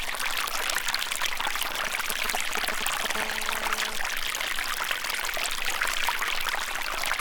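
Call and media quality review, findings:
GSM signalling bursts, 1.88–3.06 s. A nearby 2G handset in signalling mode; its RF bursts are rectified in the audio path. The result is a galloping dit-dit-dit of short 217 Hz buzzes, only slightly below the wanted audio.

GSM phone buzz, 3.16–3.96 s. The handset is now in a call, transmitting 217 bursts per second. Front-end rectification demodulates the pulses into a steady, hard, raspy 217 Hz buzz rich in harmonics, about 13 dB below the signal.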